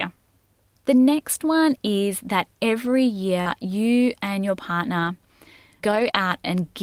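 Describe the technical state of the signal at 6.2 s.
Short concealed packet loss covers 6.11 to 6.28 s. About 20 ms of the signal never reached the decoder in time, and the receiver covered the hole by extending the last sound it had, following its pitch where voiced or using shaped noise where not, before blending back into the real audio. The result is a brief smear or wobble. A short sound such as a consonant may vanish there.

Just before this, a lost packet rebuilt from error correction spans 5.91 to 6.16 s, so the two overlap and the 6.2 s moment falls just after its end. Roughly 120 ms was replaced by the low-bitrate copies carried in the following packets, covering six lost packets. No gap is heard, but that stretch sounds rougher and noisier.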